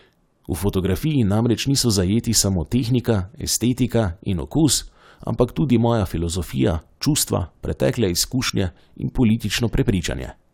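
Near the end of this speech recording, from about 8.47 to 8.50 s, there's a short glitch lasting roughly 36 ms. That's a corrupt frame decoded: a couple of compressed frames arrived with damaged bits, and the decoder played them anyway, so misread gains and codes threw energy into the wrong frequencies. The burst peaks fairly hot, somewhere near -10 dBFS.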